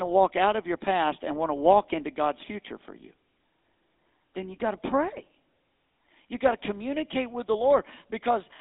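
Speech passed through the GSM full-rate codec for its whole length, consistent with a 13 kbps pulse-excited coder, which gives it a buzzy, gravelly roughness and a narrow band of roughly 250 Hz to 3.7 kHz.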